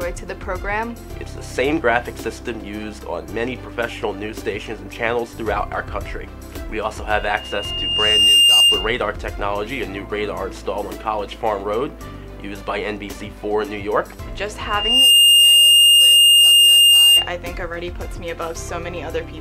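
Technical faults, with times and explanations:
7.09 to 9.05 s and 14.64 to 17.31 s, loudspeaker feedback squeal: the microphone picked up the loudspeaker it was feeding, and at 2.8 kHz the loop gain rose above one, so that frequency kept reinforcing itself on each pass. A single piercing 2.8 kHz tone swells up, climbing over about a second and a half the first time and in about 0.4 s the second time, to sit roughly 15 dB above the rest of the audio.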